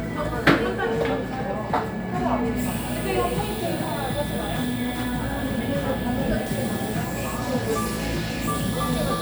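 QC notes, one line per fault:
Nothing stood out on listening to this recording of sounds.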